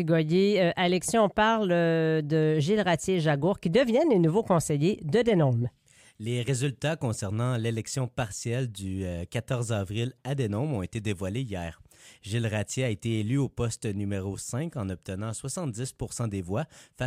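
Nothing technically wrong turns up anywhere in this audio, so there are no problem spots to point to and no causes to chase down.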